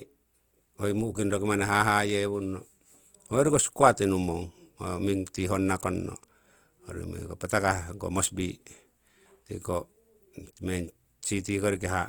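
From start to finish, the speech was likely squeezed through Opus compression running in its CELT music mode at a low rate, with a grain that fits roughly 24 kbps. With too few bits to code every band exactly, the encoder kept each band's energy but rebuilt the finer detail by folding lower bands upward or filling them with noise. The damage is plainly audible as a rough, grainy texture across the voice, though the band stays full, reaching up to about 20.1 kHz.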